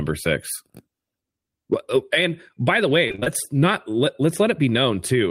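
Just after "and by the way", from 3.07 to 3.28 s, the speech breaks into repeated packet loss with a robotic sound. Over this fifth of a second, short chunks repeatedly went missing, the longest about 22 ms. Each hole was patched by extending the preceding sound, so roughly half the stretch is concealment. It sounds choppy and robotic until "not let" resumes. A spectrogram would show smeared, frozen harmonic bands alternating with abrupt edges, and the waveform would show repeated, copied-looking cycles.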